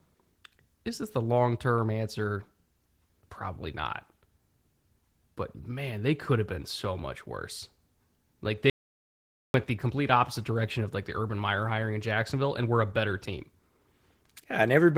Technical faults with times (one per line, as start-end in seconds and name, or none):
0.00-14.97 Opus voice compression
8.70-9.54 audio dropout to silence